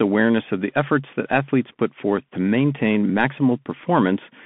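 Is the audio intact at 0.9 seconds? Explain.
No. At 0.9 s, as throughout the clip, the speech passes through a Bluetooth CVSD headset codec, a one-bit delta coder whose adaptive step lags fast rises. The band sits near 150 Hz to 3.5 kHz, sibilants rasp, and granular hiss lies under the speech; the codec damage is plainly audible.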